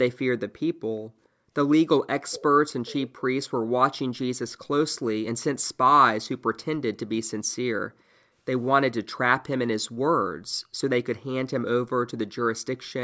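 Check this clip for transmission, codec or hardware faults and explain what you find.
Two kinds of fault are audible: an echo leak and background gated by the echo canceller.

Echo leak, 2.31–2.43 s and 6.56–6.63 s: a delayed speech copy trails by 423 ms, about 15 dB down, then around 40 dB down. The likely cause is loudspeaker sound escaping incomplete echo cancellation.

Background gated by the echo canceller, 7.93–8.34 s: the room sound drops by up to about 39 dB for roughly 400 ms while the canceller holds the microphone down, then returns.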